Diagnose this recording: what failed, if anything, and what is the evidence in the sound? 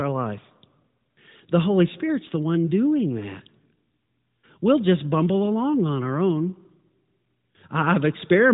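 Nothing failed here.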